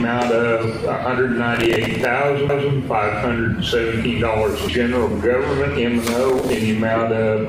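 From 1.55 to 2.05 s, processor overload crackle tears through the audio: the processor keeps missing its deadlines for buffers of a few milliseconds, and each miss replays a scrap of old audio with hard edges. Unlike a skip, it is a sustained gritty burst rather than one event.

At 2.49 s a CD skip gives a single tick, a very brief mute, and then the sound resumes from a different point on the disc, so the audio jumps instead of crackling.

From 6.29 to 6.56 s the same overload crackle returns as a shorter burst of torn, repeated fragments.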